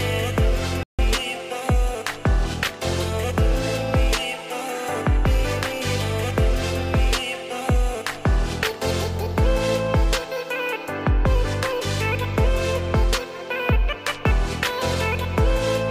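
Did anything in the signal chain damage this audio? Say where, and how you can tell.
Yes: a playback stall at 0.83 to 0.99 s cuts the sound to silence for about 150 ms, likely because the player ran short of data or its thread was blocked.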